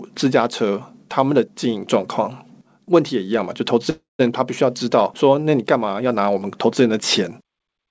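From 3.90 to 4.21 s there is a call audio freeze. The last sound buzzes or hisses and fades into silence, then resumes intact, likely from delayed packets draining the jitter buffer.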